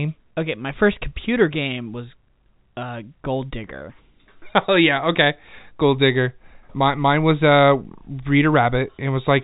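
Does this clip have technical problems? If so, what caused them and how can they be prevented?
No, this clip has no technical problems, so there is nothing to prevent.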